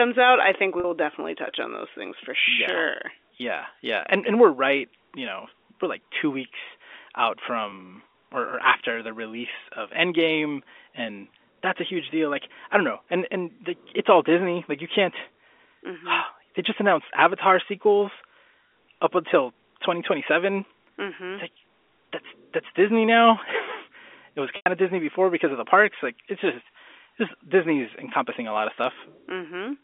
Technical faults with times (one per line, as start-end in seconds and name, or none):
0.80-0.84 packet loss with pitch repetition
7.70-7.72 packet loss with pitch repetition
24.56-24.66 packet loss with pitch repetition